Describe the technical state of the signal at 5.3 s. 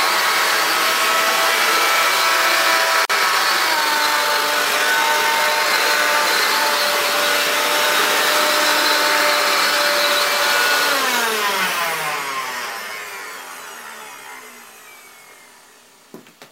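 At 5.3 s the sound sits inside a time-stretched section (3.54 to 5.80 s), running about 1.53 times faster yet at unchanged pitch, so it turns rushed, likely from software dropping short pieces to shorten it, unlike a plain speed-up, which would raise the pitch.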